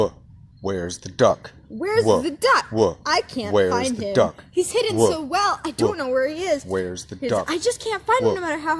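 Nothing in this one stands out as a technical problem; it's a fault-free bit of audio as far as the ear can tell.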